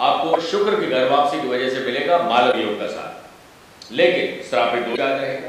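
At 0.30–0.36 s, 2.49–2.54 s and 4.93–4.99 s the speech is broken by damaged data in a compressed stream, each event lasting about 50 ms. Corrupted bytes there make the decoder misread or reject frames and lose sync until it finds the next frame header, which sounds as a chirp, squawk, click or short hole. On a spectrogram each shows as a brief broken patch, a smear or a gap, cutting across the speech harmonics.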